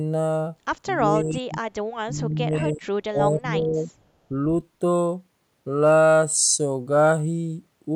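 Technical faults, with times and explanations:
1.01–1.63 s, 1.96–2.87 s and 3.1–3.9 s, speech suppressed in double talk: the echo canceller likely lost track of which sound was the far-end echo while both sides spoke at once, and clamped down on the near talker along with it. The speech sinks sharply in each stretch, by roughly 30 dB in the first, around 25 dB in the second and about 15 dB in the third, then recovers between them.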